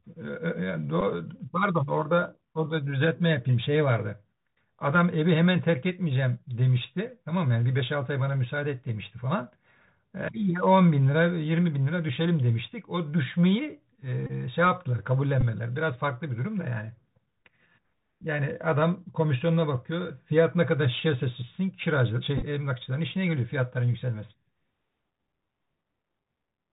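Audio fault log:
throughout: Bluetooth CVSD headset codec. The 64 kbps one-bit delta coding leaves nothing above 4 kHz, and the adaptive step cannot track fast high-frequency swings. Sibilants turn scratchy, loud bright sounds distort, and a granular hiss sits beneath the speech.
1.01–1.03, 14.27–14.32, 15.41, 22.38–22.44: Bluetooth headset packet repeated. Lost link packets were replaced by re-decoding the previous packet's bits, adding a brief 267 Hz buzz lasting about 7.5, 26, 11 and 30 ms. The last is scattered over 45 ms, with the longest run around 10 ms.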